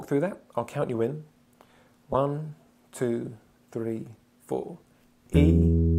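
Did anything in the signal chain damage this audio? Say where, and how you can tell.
Yes, lost LE Audio frames on the Bluetooth link, concealed by the LC3 codec, at 2.13–2.15 s and 4.61 s. Each gap is about 15 ms, which fits two lost frames. The decoder refills them with the previous spectrum at random signs, so a spectrogram shows brief noisy vertical smears where tonal lines blur.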